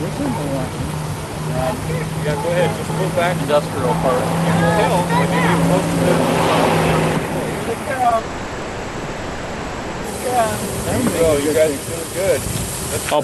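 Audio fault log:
8.03, 8.09–8.12 and 8.16–8.18 s, short concealed packet loss: three quick smears or wobbles land within about 150 ms, each breaking the sound's flow for an instant before it settles back. These are gaps of 10, 20 and 10 ms where audio failed to reach the decoder in time. The receiver bridged each one by extending the preceding sound, following its pitch where there was one and using shaped noise where there was not, then crossfaded into the real signal.
8.18–10.05 s, long network dropout: right after the last wobble, the sound turns into a stretched, synthetic continuation lasting about 1.9 s. It never falls to silence, and then the sound resumes with that stretch of material simply absent. This is likely a network outage in which nothing arrived for the whole span, so the receiver kept generating a continuation of the last sound until real audio resumed. The sound is band-limited to about 12 kHz, which together with the coding texture points to Opus at around 48 kbps.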